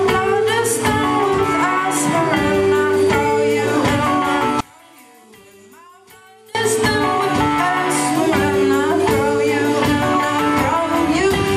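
One channel inverted, 4.61 to 6.55 s: the sound falls about 28 dB, likely because reversed polarity cancels what both channels share in mono.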